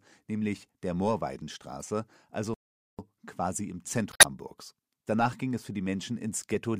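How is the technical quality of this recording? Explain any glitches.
The recording has three audible glitches of two kinds, all in the first two thirds of the clip.

Damaged data in a compressed stream occurs at 1.81 s and again from 4.09 to 4.25 s. Corrupted bytes in the encoded stream leave the decoder unable to read those frames, so it loses sync and searches forward for the next valid frame header. The first is a very short blip. The second lasts about 0.15 s and is heard as a brief disruption such as a chirp, squawk, click or short hole.

A playback stall runs from 2.54 to 2.99 s, where the sound cuts out mid-flow for about 0.45 s before continuing. The likely cause is the player running out of buffered data or its playback thread being briefly blocked, leaving the output silent until it recovered and resumed.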